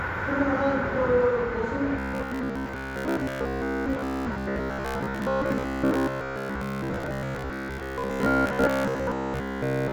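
Sounds that, from 1.99 s to the end, turn into a rigid metallic buzz at 66.8 Hz: robotic sound, likely from repeated short buffers of about 15 ms filling most of the time.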